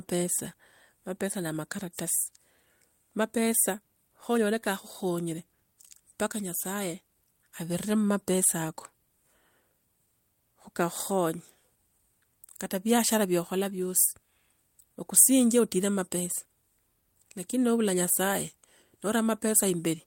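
Clock drift between sender and receiver runs through the whole speech clip: the sender's audio clock is running a few percent fast, around 4 percent, so samples arrive quicker than the receiver plays them and its jitter buffer keeps filling, leaving small timing hiccups scattered unevenly across the recording.

From 0.05 s to 20.05 s the receiver answers with repeated timing corrections, trimming short pieces out of the stream to hold its buffer in check against the 104 percent sender rate. Every edit removes rather than repeats audio, at irregular spacing, and comes across as slight skips and an uneven tempo.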